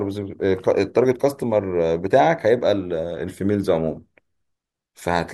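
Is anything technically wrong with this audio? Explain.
No, nothing technically wrong can be heard here.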